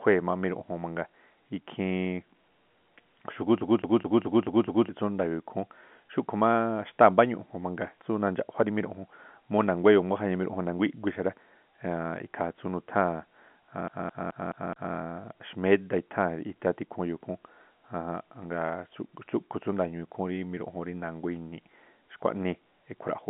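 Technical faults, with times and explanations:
3.61–4.89 s and 13.88–14.95 s, CD stuck on one turn: the speech stutters in a rapid, even loop. The same 0.21 s fragment repeats six times, then five, with a tiny gap at each jump, because a scratch kicks the laser back one track every revolution.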